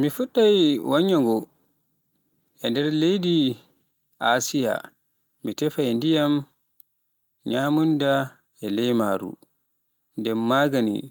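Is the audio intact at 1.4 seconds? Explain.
No. Clock drift between sender and receiver runs through the whole speech clip: the sender's clock is roughly 3% slow, so the receiver's jitter buffer keeps draining. Repeated timing corrections span 0.22 to 10.93 s, including 1.4 s. The receiver repeats short pieces to keep up, playing at 97% speed and adding around a third of a second, heard, if at all, as slight hiccups or an unsteady tempo.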